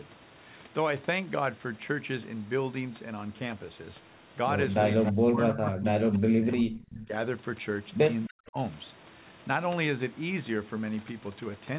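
Speech, band-limited to 4 kHz as on a narrowband phone line, with an echo leak at 5.05–5.12 s, 6.14–6.19 s and 6.52–6.92 s: copies of speech delayed by 289 ms, about 10, 30 and 15 dB down, showing as weak repeated harmonic traces. Speech suppressed in double talk at 5.12–6.72 s, 6.88–7.13 s and 8.27–8.58 s dips by roughly 20, 25 and 40 dB, leaving notched envelopes and gaps, likely from an echo canceller clamping during overlap.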